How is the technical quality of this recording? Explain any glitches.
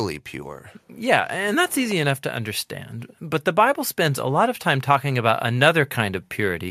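No glitches can be heard in this speech recording. There is no technical fault to explain anywhere in it.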